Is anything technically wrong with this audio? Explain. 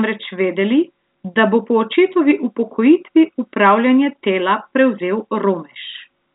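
No, nothing is technically wrong with this speech; it carries the narrow telephone bandwidth of G.711 A-law coding, with nothing above about 3.8 kHz, which fits a standard 64 kbps telephone channel.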